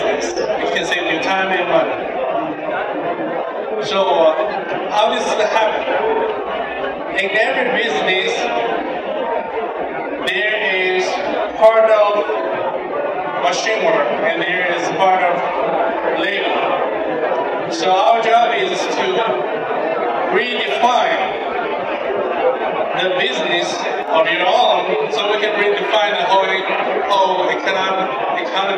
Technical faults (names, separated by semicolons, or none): one channel drops out